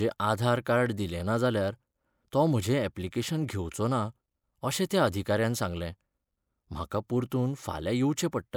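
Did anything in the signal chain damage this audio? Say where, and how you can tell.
No, nothing in the recording shows damage from any stage of the signal chain.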